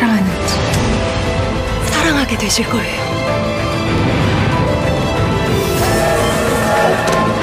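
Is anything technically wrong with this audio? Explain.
Yes. There are overlapping chunks at 0.84–0.88, 1.88–1.93, 2.93–2.98, 3.98–4.03, 5.03–5.08, 6.08–6.12 and 7.12–7.17 s. Each 1-second chunk begins about 48 ms before the previous one ended, so that sliver of sound plays twice at every join, producing a regular click or stutter.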